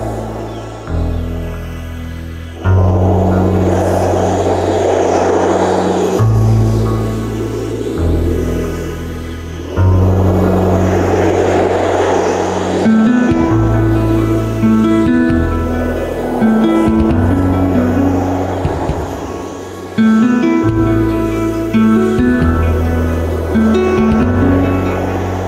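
Gain pumping runs through the whole clip, with the level swinging by around 10 dB, so loud and soft passages sit unnaturally close together and the sound is squashed. The likely cause is input gain set far too high, with a fast limiter or compressor pulling it down on each peak.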